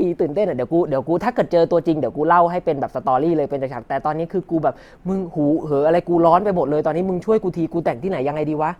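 At 4.40 s the speech abruptly loses quality and stays degraded to the end of the clip, with no gap or dropout at the switch. This is an adaptive stream at a lower bitrate: the player moved to a leaner encoding of the same stream when the connection slowed. Codec artefacts become more audible, consistent with Opus falling from about 64 kbit/s to 24 kbit/s.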